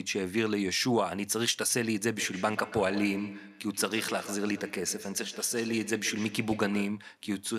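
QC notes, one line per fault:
2.16–7.08 s: feedback echo between two devices. The speech returns around every 150 ms, peaking about 13 dB below the direct sound, as a second device's loudspeaker feeds a microphone whose echo canceller cannot remove it. The fixed repeat spacing distinguishes it from room reverberation.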